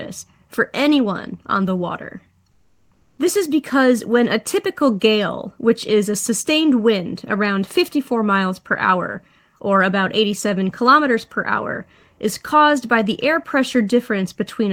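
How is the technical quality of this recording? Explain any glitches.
There is one glitch. From 2.51 to 3.17 s, a pause in the speech carries comfort noise in place of the background. The natural room sound gives way to a steady, featureless hiss about 2 dB quieter. This is likely Opus DTX halting transmission while the receiver synthesises filler noise.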